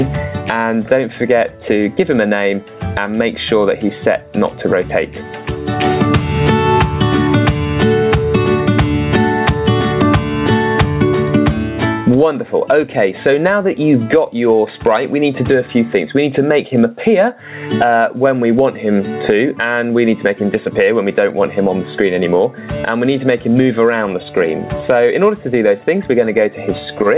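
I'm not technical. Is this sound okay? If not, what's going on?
No, not quite. There's gain pumping all the way through, from the first second to the last. The level gets shoved down each time something loud comes in, so it seems to breathe in and out by a big margin. The likely cause is the microphone level set way too high, with an automatic limiter clamping it on every loud moment. That also squashes loud and soft parts together. The dull, phone-like top end, with nothing above about 4 kHz, is just how a call line carries sound.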